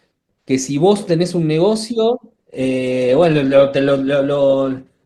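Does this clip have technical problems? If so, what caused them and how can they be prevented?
Yes. From 2.30 s to the end at 5.05 s, the speech suddenly drops in quality as codec artefacts rise, with no gap. This is an adaptive stream at a lower bitrate, consistent with a switch from about 64 to 16 kbit/s Opus after the connection slowed. A steadier connection or a larger playback buffer would prevent it.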